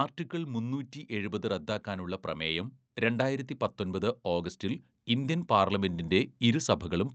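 A speech recording, heard through an Opus call path whose coding limits the top end to about 8 kHz, has an automatic gain rising fault from 2.25 s to the end. The gain control judged the input too quiet and kept lifting it, so speech and background noise swell together. That shared, gradual climb marks it off from compressor pumping, which tracks the voice quickly.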